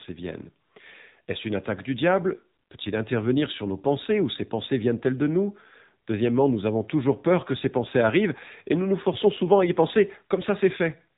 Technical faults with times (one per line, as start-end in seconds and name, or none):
0.00-11.18 AMR narrowband mobile codec